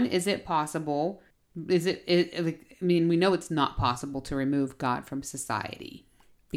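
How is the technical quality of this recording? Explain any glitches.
No audible glitches or faults.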